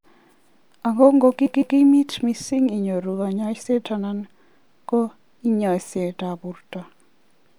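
From 1.45 to 1.77 s, a short run of compressed frames was written twice over, so the decoder plays the same block of about 157 ms two extra times, which fits a run of six frames. The result is a stuttering repeat of that fragment of speech, before the talk carries on with "mising inyoru kanyaishet ana". The repeats stretch the clip by about 0.31 s.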